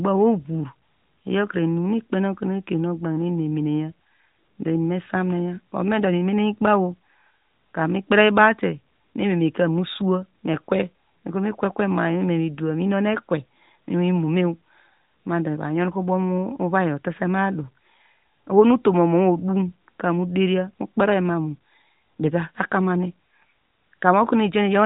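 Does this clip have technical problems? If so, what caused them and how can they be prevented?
No, nothing stood out as a technical problem on listening to this speech clip, so there is nothing here that calls for prevention.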